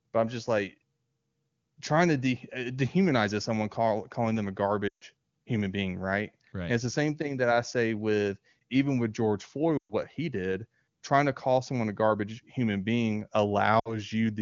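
It's a speech clip with lost AMR speech frames in three spots: 4.88 to 5.04 s after "call calling them a", 9.78 to 9.93 s before "he did trying to", and 13.79 to 14.0 s after "a garbage human being". In each gap the decoder stretches the last good frame and fades it, so you get a quick drop to near silence lasting about 140, 120 and 60 ms, with the voice coming back weak or rough for a moment, while the wideband audio otherwise sounds clean.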